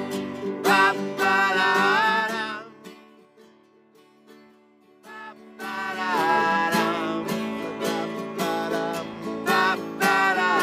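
From 5.0 to 6.34 s there is zipper noise: a level change of around 25 dB is applied in 2 dB jumps rather than as a continuous ramp, at about ten steps a second. Each jump makes a small click, so a fast ticking rides on the sound for as long as the level is moving.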